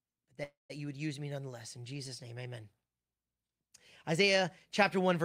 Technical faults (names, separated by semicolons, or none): call audio freeze